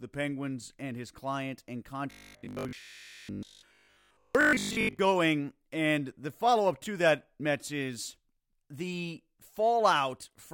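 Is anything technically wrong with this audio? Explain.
Yes. From 2.11 to 4.99 s, just after "and his client and", the speech turns into a rigid, metallic buzz at 50 Hz, still roughly tracking the words. This is robotic sound from repeated short buffers, likely caused by audio arriving too seldom, so most of that stretch is filled by looping the last 20 ms of sound while the real audio is skipped.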